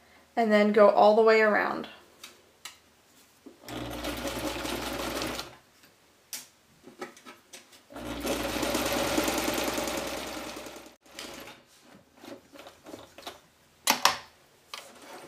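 No faults detected anywhere in the recording.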